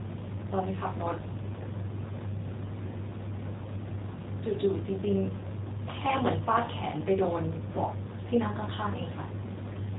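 From start to finish the speech sounds slightly rough and synthetic, with a buzzy, plainly audible coarseness and nothing above 3.8 kHz, so sibilants and air are gone. This is G.729 codec damage, and its character points to the 8 kbit/s G.729A variant. The codec keeps only a vocal tract filter, a pitch predictor and a few pulses for each short frame, then resynthesises the speech from those. That model-based rebuilding produces the artificial edge.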